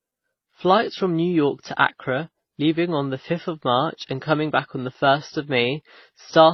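Throughout this speech clip the sound has a dull, band-limited top and layered, mismatched artefacts that never settle into one codec's character. That points to transcoding between lossy codecs, likely an MP3 at a very low rate feeding a WMA stage and then HE-AAC at around 24 kbit/s. Each later encoder spent its bits re-coding the earlier damage, the lowest bandwidth in the chain persisted, and their artefacts stacked.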